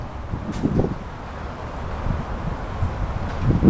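Nothing stood out on listening; the audio sounds like an ordinary call recording, with nothing above 8 kHz, which fits a G.722 call codec.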